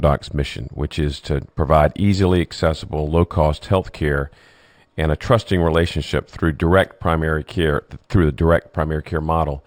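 Across the whole speech clip there's imaging from linear upsampling. The sound points to a 12 kHz original raised to 48 kHz by simple straight-line interpolation. The top end is dulled, and a faint mirrored copy, roughly 30 dB down, sits between 6 and 12 kHz, adding a thin metallic shimmer on sibilants.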